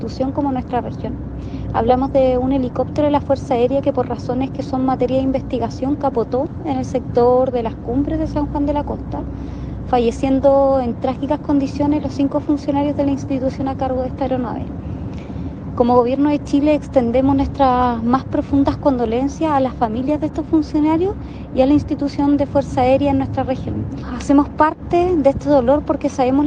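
No technical faults are audible.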